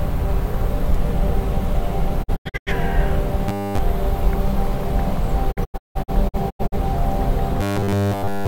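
At 2.22 s a digital broadcast dropout begins and lasts until 2.72 s. The receiver mutes in several short holes spread over about 0.43 s, with each cut taking a 20 ms fade. About 256 ms of sound is lost in total, and the longest hole is about 85 ms.

From 3.48 to 3.78 s the sound turns into a rigid, metallic buzz at 100 Hz. This is robotic sound from repeated short buffers, likely caused by a 10 ms block being repeated while new audio was late. Essentially all of the stretch is repeated material. Only a rough outline of the original sound survives under the fixed pitch.

A second dropout runs from 5.51 to 6.77 s. Here about 512 ms is lost across roughly 1.2 s, in 20 ms fades to silence. The longest gap is about 171 ms, and the sound returns further on in the programme after each hole.

The same 100 Hz robotic buzz returns at 7.61 s and continues to the end of the clip at 8.48 s.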